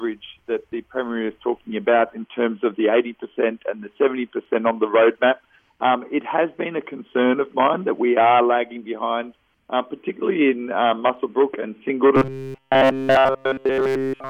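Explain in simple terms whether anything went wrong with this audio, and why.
From 12.16 s to the end, a rigid metallic buzz at 133 Hz appears. That's robotic sound from repeated short buffers, likely a tiny 7.5 ms chunk looping.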